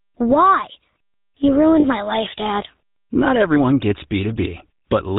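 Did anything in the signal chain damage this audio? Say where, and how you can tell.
Yes. At the codec stage, the speech passed through the GSM full-rate codec, and the damage is plainly audible for the whole clip. The encoder reduces the voice to a vocal-tract filter fed by a sparse, regularly spaced pulse excitation, discarding most of the fine detail. You can hear this as a gritty, buzzing texture on every syllable and a hard loss of everything above 4 kHz, which fits the 13 kbps full-rate mode.

At the network or transport stage, lost GSM frames interrupt the audio twice, from 1.80 to 1.85 s, just before "my life", and from 4.74 to 4.82 s. The decoder concealed each gap by reusing the parameters of the last good frame. That produces a brief metallic, rasping smear in place of the real sound, about 40 ms in the first gap and 80 ms in the second, consistent with two and four missing 20 ms frames.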